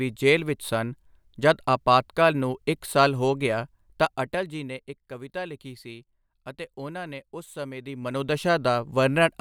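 From 7.77 to 8.41 s, just after "ਅਤੇ ਉਨ੍ਹਾਂ ਨੇ ਉਸ", the speech shows zipper noise: a level change of roughly 15 dB applied in unsmoothed 1 dB steps, around twenty per second, each leaving a faint tick. The waveform shows a staircase envelope, and the spectrogram shows thin vertical broadband lines at every step.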